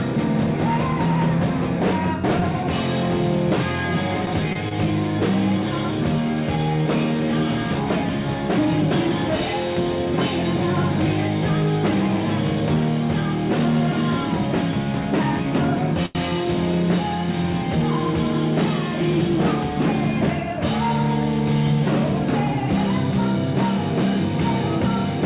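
Around 2.4 s there's a short stall from a late packet: the buffer ran dry, so the last sound gets held about 17 ms, then carries on with nothing lost. At 4.53 s and again at 4.69 s there's short concealed packet loss, roughly 20 ms each, patched by extending the preceding sound, so you hear a quick smear or wobble. A bigger late-packet stall comes at 16.06 to 16.31 s, where the sound is stretched about 92 ms before resuming. All of this sits on a G.711 call path, so nothing reaches above 4 kHz.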